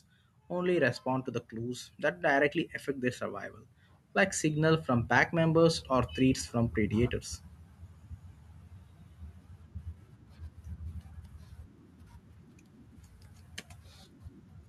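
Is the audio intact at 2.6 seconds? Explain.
No. At 2.6 seconds the clip is at the end of an automatic gain rise that began at 0.49 seconds. Over those two seconds the level climbs by about 4 dB. The gain control judged the input too quiet and raised its gain step by step. Voice and background noise swell together, so the room gets louder along with the speech. The rise settles just before "affect their survival like".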